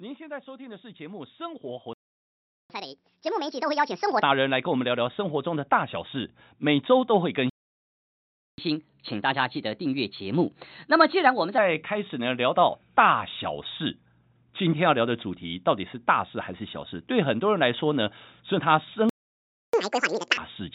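From 0.44 s the speech and its background both swell steadily louder, climbing by about 21 dB before levelling off around 12.5 s. That is automatic gain rising: the gain control judged the input too quiet and kept turning it up over several seconds, lifting everything together rather than the voice alone.

At 1.94 s the sound cuts out mid-flow and stays silent for about 760 ms, until 2.70 s. This is a playback stall, most likely the player running short of data or having its audio thread blocked, so nothing reached the output until it recovered.

Right after, from 2.70 to 4.23 s, the speech runs quick and high, at 1.5 times normal speed and roughly seven semitones sharp, then settles. This is catch-up at higher speed: the player resampled its backlog to win back the time lost in the stall.

A second playback stall silences the audio from 7.50 to 8.58 s, about 1.08 s. The catch-up at higher speed that follows, from 8.58 to 11.58 s, is gentler: 1.15 times speed and around two semitones up. 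It is stretched over a longer stretch, so it sounds like a slight rush and brightening.

The third stall runs from 19.09 to 19.73 s, about 640 ms of silence. It is followed by the most obvious catch-up, at double speed and nearly an octave high, from 19.73 to 20.37 s. Throughout, the G.711 call path keeps the sound narrowband, with nothing above 4 kHz.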